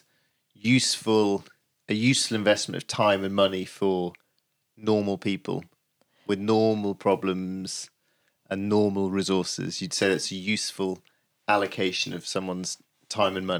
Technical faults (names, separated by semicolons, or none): none